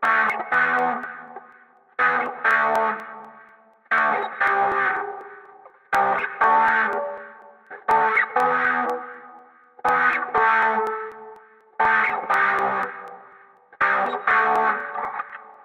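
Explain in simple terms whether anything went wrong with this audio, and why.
Something did go wrong: the audio has periodic USB or driver dropouts. From 0.05 s to 15.54 s, a few milliseconds of sound go missing about every 0.25 s. The gaps are skipped, not filled with silence, so the sound jumps forward and you hear steady ticks. Random clicks would come at uneven times. These keep a strict beat and only sound where there is audio, which points to a background task interrupting the audio connection on a fixed timer.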